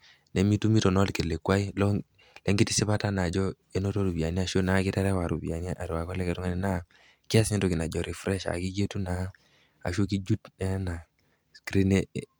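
No technical faults can be heard anywhere in this speech recording. At no point does anything in the signal stand out as a fault.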